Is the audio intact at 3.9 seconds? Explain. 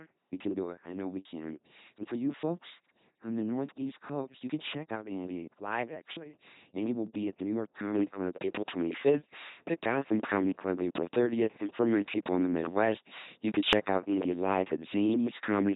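No. At 3.9 seconds the speech is coming through an LPC-10 vocoder, which runs for the whole clip. The sound points to a bitrate of about 2.4 kbit/s. Each moment is rebuilt from a short all-pole filter excited by either a buzzing pulse train or noise, so the result is a heavily degraded, mechanical robot voice. On a spectrogram, voiced stretches show rigid, evenly spaced harmonic lines, unvoiced stretches show filtered noise with no harmonic lines, and nothing appears above 3.8 kHz.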